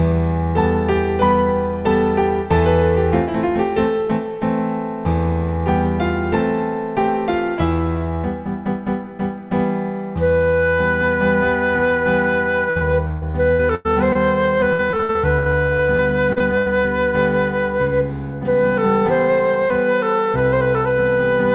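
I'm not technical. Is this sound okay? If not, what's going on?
No. From 12.70 to 14.17 s and again from 14.73 to 16.68 s there is repeated packet loss (robotic sound). Chunks of audio, each up to about a tenth of a second, failed to arrive, and each hole was patched by stretching the previous sound. That makes these stretches choppy, with pieces missing.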